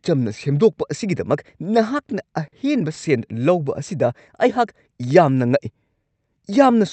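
At 2.47 to 2.55 s and again at 2.94 to 2.99 s, the speech briefly hangs on one sound, drawn out with a faint buzz or dip. Each is a short stall from a late packet: the jitter buffer ran dry, the receiver stretched the last sound by about 50 ms and then 20 ms, and then resumed without losing anything.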